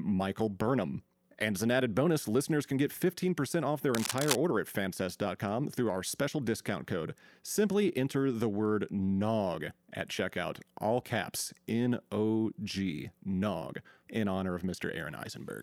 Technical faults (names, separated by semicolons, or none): cable scratch noise